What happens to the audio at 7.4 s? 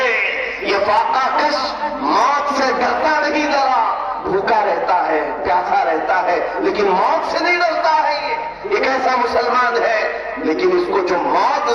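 Nothing goes wrong at 7.4 s; the audio carries straight through that moment without a dropout, glitch or other fault.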